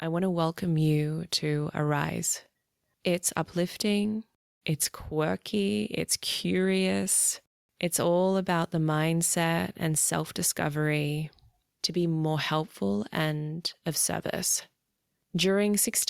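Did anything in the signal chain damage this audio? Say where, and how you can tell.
No, nothing in the signal chain damaged this recording.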